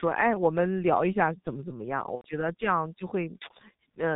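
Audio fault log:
throughout: G.723.1 codec. The speech sounds muffled and hoarse, with smeared consonants and nothing above 4 kHz. The damage is heavy and fits the 6.3 kbit/s mode of this early internet-telephony coder. It cuts speech into 30 ms frames and describes each with a coarse, slowly updated model of the voice, so the fine detail and quick changes that make consonants crisp never reach the output.
2.15 to 2.27 s: VoIP packet loss concealed by the speech codec. For about 90 ms, consistent with three missing 30 ms frames, the speech smears into a stretched sound that fades in level. The decoder had no data, so it kept repeating its last pitch and filter while turning the gain down frame by frame. Because each frame builds on the one before, the voice stays weak and distorted for a short while after 2.27 s.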